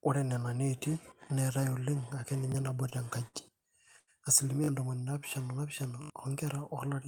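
A brief stutter at 2.52 to 2.54 s is a repeated buffer: the device replayed a 20 ms chunk once because new audio came late, costing roughly 20 ms of sound. Sounds are then held too long with a slight buzz or dip at 2.89 to 2.95 s, 3.28 to 3.36 s and 3.99 to 4.10 s. These are short stalls from a late packet: the jitter buffer emptied and the receiver stretched the last sound by 24, 56 and 80 ms before resuming with nothing missing. Longer stutters follow at 4.64 to 4.68 s, with the same 20 ms piece sounding two extra times, and at 6.02 to 6.10 s, with four extra plays. Both are further repeated buffers, fitting a 20 ms buffer, and each loses roughly 40 and 70 ms of audio.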